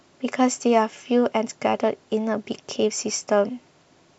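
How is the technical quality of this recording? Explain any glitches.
The recording is clearly degraded throughout the speech. It sounds dull, with a gurgling, granular edge. Likely MP2 compression at a low rate, around 80 kbps, starving upper sub-bands so they flicker off while the rest are coarsely quantised.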